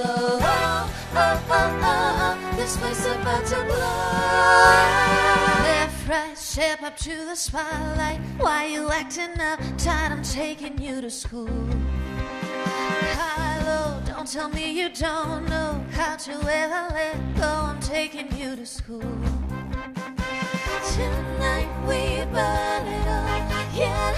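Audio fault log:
8.10, 14.07 and 20.07 s: overlap between stream segments. Brief skips as a few milliseconds are cut where 6-second segment timestamps overlap, leaving waveform jumps.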